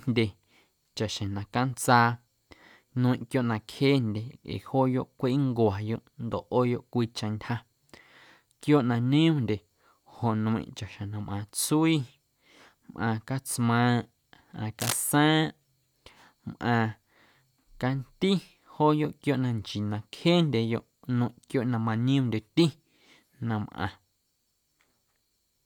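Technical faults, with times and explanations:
14.80 to 14.97 s, cable scratch noise: a dense, ragged burst of scratching lasting about 170 ms sits over the speech, only slightly quieter than it, at roughly 5 dB below. A worn cable or connector being moved is the likely cause, its contact resistance jumping about rapidly. On a spectrogram this shows as an irregular, broadband smear of vertical streaks. The waveform shows jagged, uneven spikes riding on the speech envelope.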